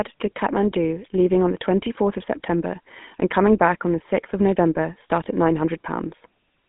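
Speech carried through the GSM full-rate codec, which fits 13 kbps, sounds buzzy and gravelly. The spectrogram shows energy only between 150 Hz and 3.5 kHz, with coarse, pulse-driven harmonics. Lost GSM frames at 5.24–5.27 s, which fits one dropped 20 ms frame, leave a brief metallic ring. In the waveform this looks like a short, repeated segment.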